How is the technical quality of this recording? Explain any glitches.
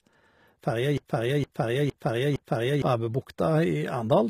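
Technical quality is poor, with two faults. Throughout, plainly audible HE-AAC compression damage: treble is replicated from lower bands rather than original, nothing above 14.8 kHz, which likely reflects a bitrate around 20 kbps. From 0.98 to 2.82 s, a broken-record loop: a 0.46 s fragment repeats four times back to back, likely a stalled stream resending its last buffer, and the audio that should have played there is lost.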